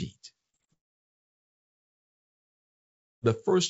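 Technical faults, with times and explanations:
0.50–0.56 s, 0.56–0.62 s and 0.65–0.70 s: short concealed packet loss. Roughly 30 ms of speech failed to reach the decoder each time, so the receiver extended the preceding sound and then blended back, leaving three closely spaced smears or wobbles that can swallow a brief consonant.
0.73–3.24 s: long network dropout. About 2.5 s of speech likely never arrived over the network. The receiver stretched the last sound into a fading buzz or hiss, then near-silence fills the gap until the audio resumes without the lost stretch, all below the call codec's 8 kHz bandwidth ceiling.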